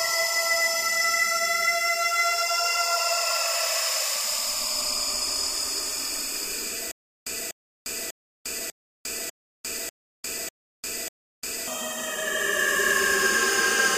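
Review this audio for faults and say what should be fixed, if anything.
From 6.91 to 11.68 s there's a stutter with silent gaps: a 243 ms burst repeats eight times, each followed by about 352 ms of dead silence, cycling every 595 ms. It's likely a stalled player or stream replaying its last fragment, so the real audio there is gone. To prevent it, give the playback or stream a bigger buffer and steadier delivery so it doesn't run dry.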